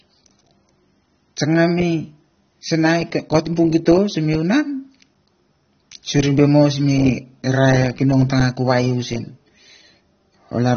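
The speech was most likely squeezed through AAC compression at a very low bitrate, with the damage consistent with something around 24 kbps, from start to finish. The encoder discarded everything above about 6.3 kHz and quantised the remaining bands coarsely, so the speech sounds dull and muffled throughout. Sibilants lose their edge and turn fizzy, and sustained sounds take on a smeared, warbling texture.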